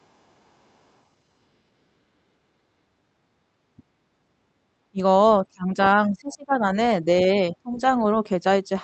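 At 4.91 to 5.01 s, 5.42 to 6.63 s and 7.35 to 7.8 s the speech sinks or breaks up, by about 25 dB in the first two stretches and about 15 dB in the last. The likely cause is speech suppressed in double talk, where an echo canceller mistook the talker for loudspeaker echo while both sides spoke and turned the talker down. The waveform shows the envelope collapsing in patches, and the spectrogram shows the harmonics fading or dropping out in gaps.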